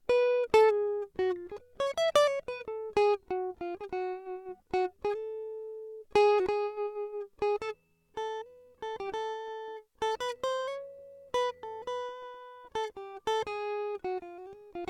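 No technical faults are audible.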